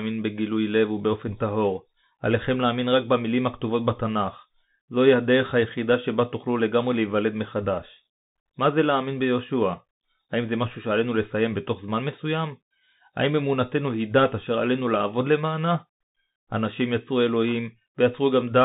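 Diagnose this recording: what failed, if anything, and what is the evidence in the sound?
The codec stage failed: the whole recording carries Bluetooth CVSD headset codec damage. Nothing passes above about 3.8 kHz, and the speech has scratchy sibilants over a granular hiss, as the 1-bit delta encoder, which fits a 64 kbps link, cannot track fast high-frequency swings.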